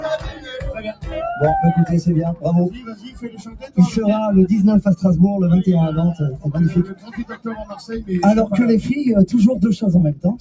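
A noise suppressor applied to music or sounds runs through the whole clip. It was built for speech, so it treats steady tones, ambience and decaying tails as noise and pulls them down. Its gain swings by roughly 15 dB. Onsets pass through, while held material sinks. The result is a pumping, fluttering level. Nothing is heard above 8 kHz, as expected from the call microphone path.

Specific sound is cut by the noise suppressor at five points. At 0.19 to 0.49 s the level falls by about 10 dB. At 0.77 to 1.07 s it drops by about 13 dB. Longer cuts follow at 2.73 to 3.78 s and 6.84 to 7.84 s, each about a second and reaching about 14 dB. The last starts at 10.15 s and runs to the end at 10.4 s, again about 14 dB. In each, sustained sound fades or its decay is chopped short.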